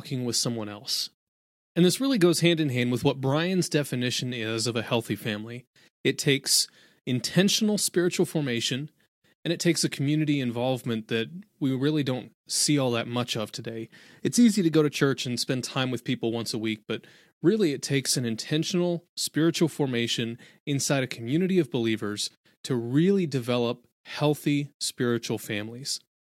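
Nothing in this recording gives itself away as a technical problem, so there's no fault to point to at any moment along the way.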